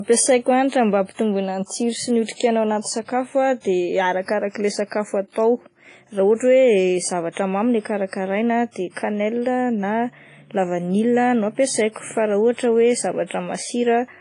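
Throughout the speech, the sound rings and smears. Hiss swells and fades with each syllable. Nothing is heard above about 10.1 kHz. This is likely WMA compression, heavily applied. The encoder uses long transform blocks, so quantisation noise spreads over tens of milliseconds around each sound. Weak spectral lines are dropped to zero. The result is washy and ringing, with a breathing hiss. The damage fits a bitrate near 24 kbps.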